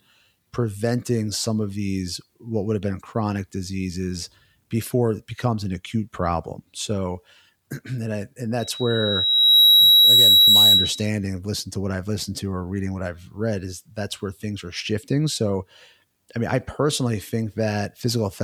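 From 8.60 to 11.10 s, just after "and I and", a microphone was picking up the loudspeaker it was feeding, and at about 3.9 kHz the loop gain rose above one. This produced loudspeaker feedback squeal: a single high tone at that frequency swells over roughly a second until it sits around 10 dB above the speech. It holds as a piercing whistle and then stops before "of listening to what".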